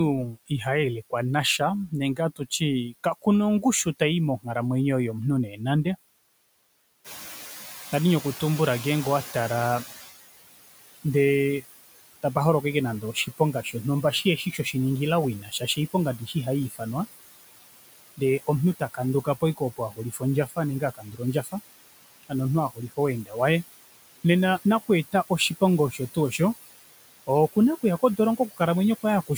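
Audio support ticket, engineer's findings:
Noise suppressor artifacts, whole clip: background pulled down about 18 dB. It dips in the gaps and swells back under the speech. Suppressor's per-band gains are chasing what it judges steady noise, frame by frame.

Speech cut by the noise suppressor: soft consonants and endings swallowed at 0.26–4.47 s (down about 17 dB), 5.49–5.86 s (about 10 dB), 12.23–16.81 s (about 18 dB), 18.17–23.36 s up to "waye nena" (about 19 dB), and from 24.86 s to the end after "waye nena" (about 18 dB). Quiet speech is being classed as noise and ducked with it.

Noise suppressor catching up, 7.04–10.07 s: room noise jumps about 12 dB near 7 s. The suppressor's estimate lags, so the noise leaks through, then settles over roughly 3 s to about 13 dB of cut. The room noise itself is genuine, sitting about 14 dB under the speech after the rise.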